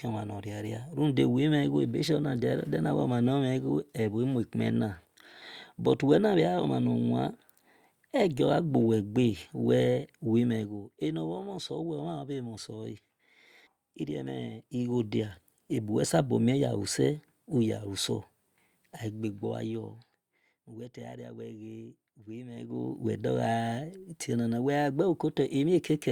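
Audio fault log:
10.48–10.92 s, 14.60–15.04 s, 19.04–20.60 s and 22.52–23.04 s, zipper noise: the level drops, rises, drops, then rises again (roughly 10, 10, 15, 15 dB) in unsmoothed steps of about 1 dB, finer on the third, around thirty a second, so each step ticks audibly.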